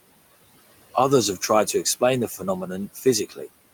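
From the start, the background sinks away between phrases and swells back in under them. These are noise suppressor artifacts: the processing judges steady noise band by band, frame by frame, and pulls it down by about 19 dB where no speech is detected, while the room noise, about 20 dB below the speech, is let through whenever speech is present.

Near the end the speech itself briefly goes faint, as if swallowed: first from 2.94 to 3.06 s, dropping by about 11 dB, then from 3.29 to 3.41 s, by about 12 dB, each lasting about a tenth of a second. This is speech cut by the noise suppressor. It mistook these soft stretches of speech for background and turned them down along with the noise.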